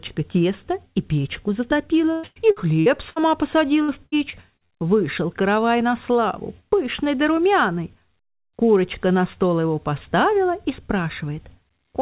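From 2.12 to 3.19 s and again 3.82 to 4.73 s there's repeated packet loss: short holes patched by stretching the last sound, so it turns choppy and robotic over the 4 kHz telephone band.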